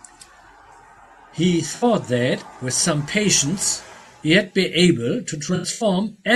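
From 1.75 to 1.84 s, and repeatedly from 5.55 to 5.84 s (longest stretch about a tenth of a second), the speech smears into noisy, phasey patches. This is AAC frame loss with concealment: the decoder rebuilds missing frames from the last good spectrum, so gaps fill with smear rather than a dropout's silence.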